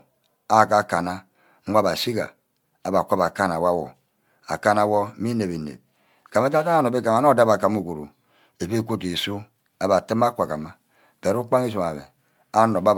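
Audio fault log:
throughout: generation loss. The speech sounds swirly, smeared and hollow, with blurred attacks and nothing above 19.9 kHz. This is likely repeated MP3 re-encoding, about seven passes at what sounds like 128 kbit/s, each re-quantising on a shifted frame grid so noise and spectral holes pile up.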